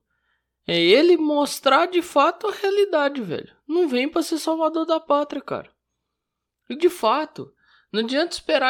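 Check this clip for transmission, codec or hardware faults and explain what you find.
One fault appears in this speech clip, a channel delay (comb filtering), from 4.93 to 6.57 s, just after "vem para ser salvador". One channel arrives roughly one sample late, around 0.02 ms, and the two are summed to mono. Because that offset is so short, the first cancellation notch falls near 20 kHz, so the sound is dulled at the very top. On a spectrogram the highest band thins during this span. The waveform shows little visible change.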